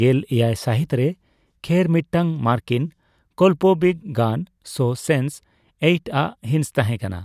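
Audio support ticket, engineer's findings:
No faults found on listening. Speech clip, nothing to escalate.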